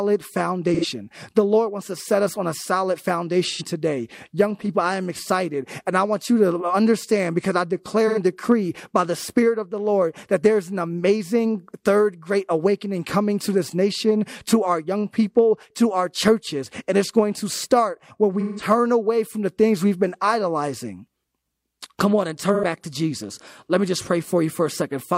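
AAC frame loss with concealment occurs at 0.74–0.85 s, 3.51–3.62 s, 8.07–8.18 s, 18.40–18.64 s and 22.54–22.64 s. Each time, the decoder lost about 85 ms of data, which fits two missing frames, except the 18.40 s event, which lost about 171 ms and fits four. The decoder covered each gap by rebuilding the last good spectrum, so the audio smears into a brief noisy, phasey patch. The longer 18.40 s patch lasts longer.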